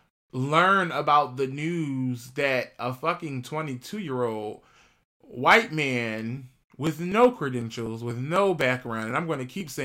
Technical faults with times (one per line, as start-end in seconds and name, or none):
6.37-9.61 periodic USB or driver dropouts